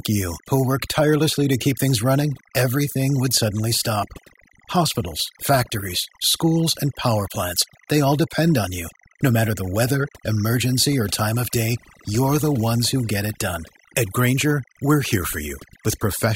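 From the first second to the end, timecode bleed runs under the speech. It is a steady chirping warble. It flips between two pitches near 1 kHz and 2 kHz. That switching is the sound of linear timecode, a square wave carrying clock data. Its frame rate is 25 per second. Here it has leaked in from a nearby track or cable. It sits roughly 20 dB below the speech.

Overdone noise removal also affects the whole clip. A noise reduction tool was pushed too hard on a noisy recording. It cuts any frequency band that falls near its noise estimate, often to nothing. Quiet parts of the voice fall below that line and vanish too. The background drops and breaks up into twinkling, warbling specks.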